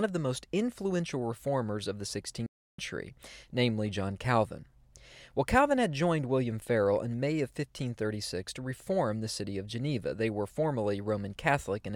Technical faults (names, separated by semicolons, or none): playback stall